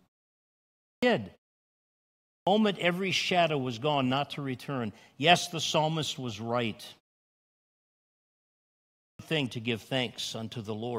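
Speech resumes abruptly, its opening sounds missing, at 0.52 s (about 0.51 s lost), at 2.04 s before "every shadow was gone" (0.43 s) and at 8.71 s before "thing to give" (0.48 s). This clipped start after a pause happens because the output device sleeps during silence and wakes too late.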